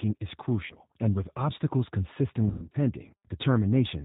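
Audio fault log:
0.66–0.74 s and 2.46–2.78 s: VoIP packet loss concealed by the speech codec. Just before "and with obstacles", about 40 ms drops out. Just after it, 200 ms goes missing in scattered gaps over 280 ms, the longest run 120 ms. The decoder stretches its last pitch and filter into a fading buzzy tone or coloured noise, and the speech stays weak briefly afterward.
Throughout: G.729 codec. The speech sounds narrowband, with nothing above 4 kHz, and noticeably rough and synthetic from being rebuilt by a low-rate model. That fits 8 kbit/s G.729A.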